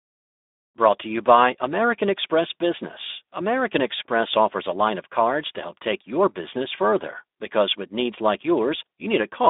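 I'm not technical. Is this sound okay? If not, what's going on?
No. Speex codec damage runs through the whole clip. This older internet-call speech codec squeezes the voice into very little data, so it sounds hoarse and grainy. It also drops everything above about 3.7 kHz, leaving speech thin and muffled, like a phone call.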